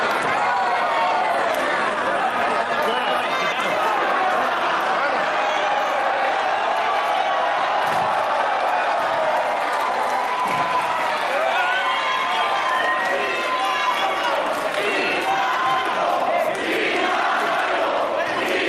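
Nothing stood out as a technical fault on listening.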